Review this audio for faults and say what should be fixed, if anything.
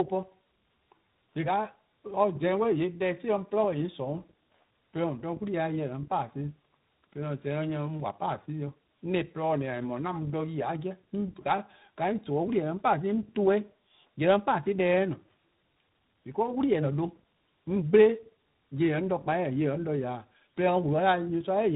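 Tandem speech coding runs throughout: the call was decoded and re-encoded at link borders, passing through two speech codecs in a row, which points to iLBC followed by G.726 with a G.711 A-law hop between. Each coder degraded the last one's output, so the speech sounds rougher and noisier than a single codec would leave it, with nothing above 3.8 kHz. To prevent it, keep the call in one codec end to end or pass the coded stream through transparently rather than transcoding at each link.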